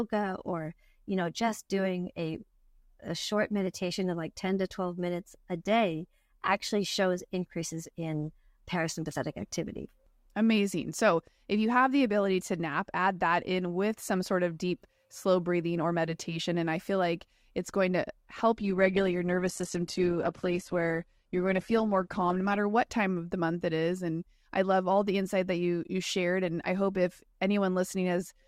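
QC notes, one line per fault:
18.57 to 22.57 s, adaptive stream at a lower bitrate: right after "like it's going to" the quality drops suddenly with no gap. Nothing is left above 12.1 kHz and codec artefacts rise, which fits Opus stepping down from around 64 to 12 kbit/s. It's back by "what time of the".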